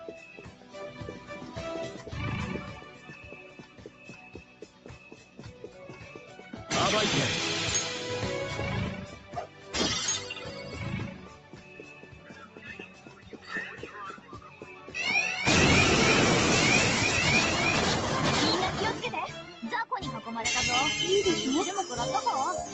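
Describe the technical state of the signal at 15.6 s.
A noise suppressor applied to music or sounds is active at 15.6 s, as it is for the whole clip. It was built for speech, so it treats steady tones, ambience and reverb as noise. Onsets pass, but sustained parts and decay tails get pulled down by about 10 dB. The level pumps and flutters, and the sound thins out between attacks. The band stops near 8 kHz, as the call path allows.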